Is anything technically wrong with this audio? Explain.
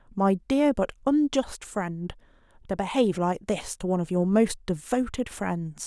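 No, nothing is technically wrong with this audio. There is no fault here that needs explaining.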